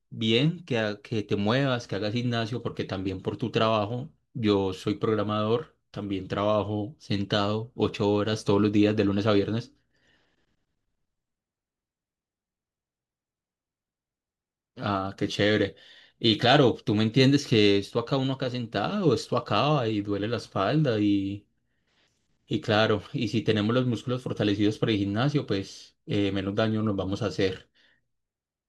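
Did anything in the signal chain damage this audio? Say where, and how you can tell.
No, nothing in the signal chain damaged this audio.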